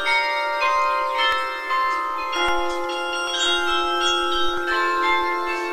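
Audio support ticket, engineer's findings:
Forward skips at 1.32, 2.49, 3.27 and 4.57 s. No gap; sound jumps ahead. First loses about 70 ms, others about 20 ms. Likely dropped buffer (overrun): capture not read in time, hardware overwrote samples, ends joined directly.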